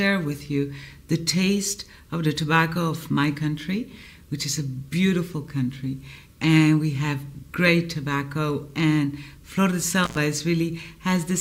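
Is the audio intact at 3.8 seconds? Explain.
Yes, the audio is intact at 3.8 seconds, with no dropout, click, distortion or other fault at that moment.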